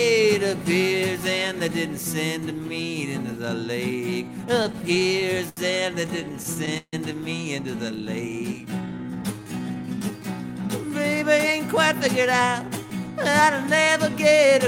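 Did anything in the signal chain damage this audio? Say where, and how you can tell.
Yes, and it's all at the network end, in the receiver's jitter buffer. First come repeated stalls (stutter), from 4.63 to 5.59 s and again from 6.07 to 6.95 s. Packets were turning up late, so the buffer kept running dry and the receiver stretched the last bit of sound to cover each hole. The first run has ten short gaps, the longest 78 ms, and about 163 ms is filled in. The second has eight gaps totalling 224 ms, with one long 152 ms hold. Nothing is actually lost, but the audio catches and drags.

Then there's a jitter buffer slow-down from 7.89 to 10.12 s. Having just run short, the buffer rebuilt its reserve by repeating single pitch periods and slivers of pauses over and over. That adds 287 ms and plays the stretch at 87% speed. You can tell it's time-stretching rather than a tape-style slowdown because the pitch stays put while everything sounds drawn out.

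Last is a jitter buffer speed-up from 11.88 to 14.53 s, where the buffer was holding more than it wanted and trimmed it by cutting tiny pitch-period-sized pieces, around 150 ms in all. Playback runs at about 105% with unchanged pitch, so that closing stretch feels slightly hurried.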